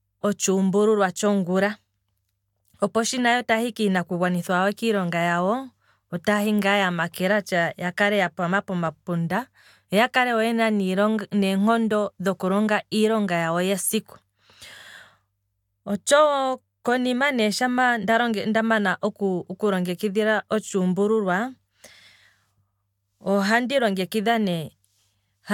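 No faults turn up anywhere in this speech recording.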